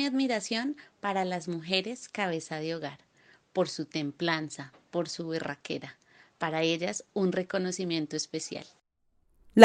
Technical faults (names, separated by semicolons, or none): none